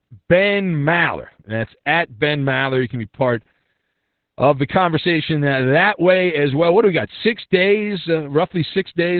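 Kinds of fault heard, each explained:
Opus voice compression: The codec has dropped to its lowest speech setting, coding only a narrow band with its linear-prediction coder and spending very few bits on the excitation, which fits a rate of around 8 kbps. The damage is heavy: nothing is left above about 4.4 kHz, so the speech sounds muffled and telephone-like, and the coarse excitation gives it a hoarse, slightly robotic edge throughout the clip.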